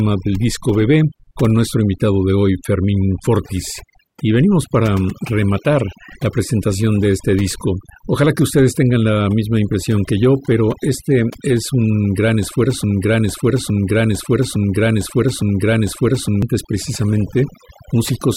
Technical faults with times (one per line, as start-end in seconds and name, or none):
0.00-18.36 overdone noise removal
12.84-16.42 broken-record loop